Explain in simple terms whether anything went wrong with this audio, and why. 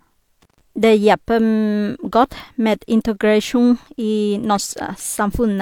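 Around 0.42 to 0.61 s there's an intermittent contact: a loose connection briefly opens, so the speech cuts out for about 0.13 s, with crackles at each edge.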